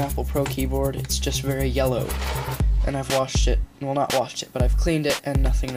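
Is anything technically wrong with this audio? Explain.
Yes. From 4.35 s to the end at 5.77 s, the audio shows low bit depth with noise shaping. The quantization is coarse, consistent with about 9 bits, and the rounding error is pushed upward in frequency, leaving a steady, thin hiss roughly 30 dB below the signal that grows toward the treble.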